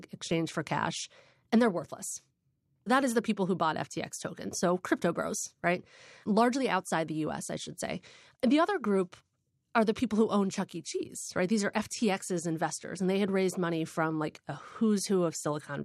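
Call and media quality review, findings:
No faults found in the speech signal: the capture, transport and playback path shows no audible defects anywhere in the clip.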